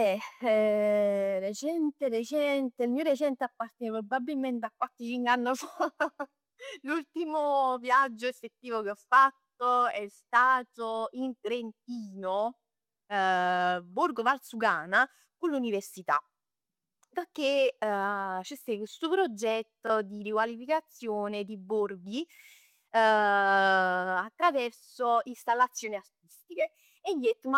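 A speech recording carries one Bluetooth stutter, from 19.87 to 19.90 s, just before "di riqualificazione di borghi". The wireless link failed to deliver audio in time, so the receiver filled the gap by replaying the slice it already held. About 23 ms goes missing, which fits a single lost packet. The result is a brief repeated fragment, a tiny hiccup, after which the speech resumes further along as though it had kept playing.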